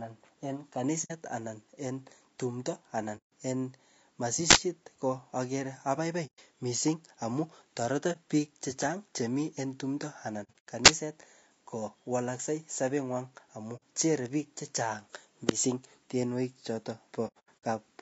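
Throughout the speech, the sound is rough and grainy, with noise between harmonics and a dull, synthetic top band. This is low-delay AAC compression, likely AAC-ELD at about 32 kbps. Its short frames resolve pitch poorly at this bitrate.

AAC frame loss with muting first occurs at 1.04 s (60 ms), then at 3.17 s (150 ms). Lost frames are zeroed. Overlapping windows fade the sound out and back in, leaving soft holes.

At 4.51 s an uninitialised buffer plays stale memory as audio. The result is a 46 ms burst of digital noise, which fits a 2048-sample block.

Muted gaps continue at 6.26 s (120 ms), just before "missing amu toreto biik", and at 8.12 s (30 ms), between "missing amu toreto" and "biik chechang chemiii". From 10.43 to 10.65 s, 180 ms is lost in scattered pieces, the longest about a tenth of a second.

At 10.86 s a second buffer burst lasts 23 ms. This fits a 1024-sample block.

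Frame loss returns at 13.76 s (60 ms). After "tienwogik chotok", from 17.27 to 17.64 s, 240 ms drops out in pieces.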